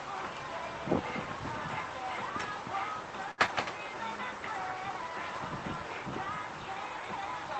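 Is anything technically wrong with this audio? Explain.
Yes, there are two faults, close together in the middle of the clip.

Short stall from a late packet, 3.31 to 3.40 s: a packet arrived late and the jitter buffer ran dry, so the receiver held the last sound for 66 ms, then resumed where it left off. Nothing is lost, but the sound is stretched, with a buzz or dip, and playback runs 66 ms later.

Short concealed packet loss, 3.46 to 3.49 s: about 40 ms of audio never reached the decoder in time. The receiver covered it with 14 ms of synthesized continuation and cut the delay back by roughly 30 ms. This is heard as a brief smear or wobble, and a short sound may be missing.

The call path adds its own coding noise, with no content above 8 kHz, which fits Opus at around 24 kbps.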